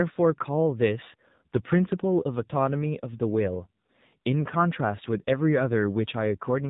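Throughout, the speech has passed through the AMR narrowband mobile codec at a low rate, which fits the 7.4 kbps mode: 8 kHz sampling removes everything above 4 kHz, and sparse pulse excitation leaves the speech muffled, buzzy and plainly synthetic.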